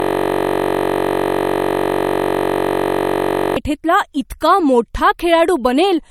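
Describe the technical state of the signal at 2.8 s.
At 2.8 s the signal is caught in a system hang loop running from the very start of the clip to 3.56 s, just before "इतका मोठा". With the host frozen, the audio hardware keeps replaying one 21.33 ms slice of its ring buffer, which fits a 1024-sample buffer. At 46.9 repetitions per second this comes across as a steady buzz rather than sound.

Throughout, including this point, nothing is present above 18.6 kHz, and the smeared, swirly texture of a coarse MP3 encode remains. This is likely low-bitrate audio saved at a high bitrate, consistent with a 48 kbit/s MP3 re-encoded at 192 kbit/s. The larger second encode cannot restore what the first one discarded.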